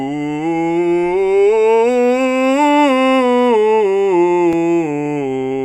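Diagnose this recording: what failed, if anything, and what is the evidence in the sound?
A brief tick or dip interrupts the music at 4.53 s, too brief to register as a gap. It is a block of digital silence lasting about 2.67 ms, where the signal drops out and snaps back with no fade. The stage is the driver or buffer. The length fits a 128-sample buffer at 48 kHz that the audio program didn't fill in time, so zeros went out instead.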